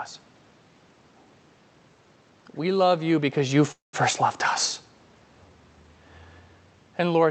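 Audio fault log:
3.71–3.95 s, call audio freeze: right after "love you because you", the speech halts and the last sound carries on as a fading buzz, dropping to silence for about 150 ms before the speech resumes where it left off. This is likely a late packet delivery that drained the jitter buffer, so the receiver padded about 218 ms with concealment. Nothing was lost, but everything after it now runs about 218 ms later.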